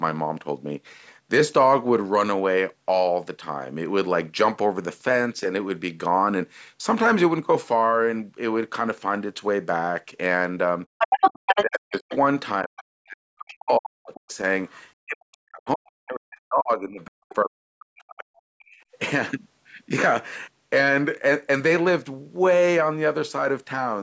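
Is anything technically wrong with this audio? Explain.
Yes. The clip has three kinds of echo-canceller fault.

Background gated by the echo canceller at 10.87 to 10.98 s and 18.66 to 18.93 s: the canceller clamped the microphone during loudspeaker playback, so the room sound drops out by about 40 dB and then returns.

Other side's voice leaking through at 10.98 to 12.16 s (roughly as loud as the speech), 14.14 to 14.79 s and 17.30 to 17.35 s (both far quieter). A second voice can be heard, most likely loudspeaker echo that the canceller failed to remove.

Speech suppressed in double talk at 11.42 to 14.29 s and 15.03 to 18.38 s: the talker's voice dips by up to roughly 40 dB in pieces totalling about 2 s and 3 s. This is likely because the canceller attenuated the talker along with the overlapping echo. The call's microphone processing limits the audio to 8 kHz.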